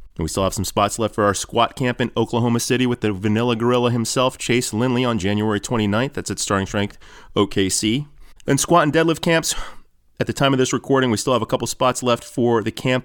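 No technical faults can be heard anywhere in this speech recording. There is nothing in the audio that needs a timestamp or an explanation.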